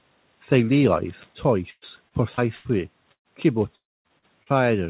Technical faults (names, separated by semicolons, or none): repeated packet loss (robotic sound); burst of packet loss; long network dropout; short concealed packet loss